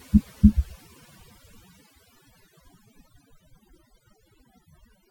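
Overdone noise removal runs through the whole recording, from start to finish. A noise reduction stage has been pushed far too hard on noisy speech, cutting individual frequency bands deeply or muting them whenever their level sits close to its estimate of the noise floor. Quiet parts of the voice fall below that threshold and vanish with the noise. The background drops and breaks up into twinkling, chirpy specks.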